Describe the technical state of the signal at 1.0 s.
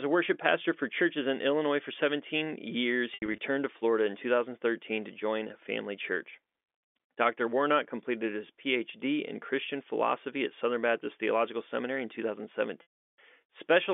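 At 1.0 s the signal is intact, carrying telephone-band speech through G.711 coding with nothing beyond the expected narrow line band.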